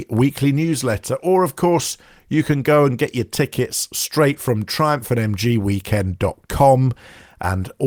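Nothing stood out on listening to the speech recording.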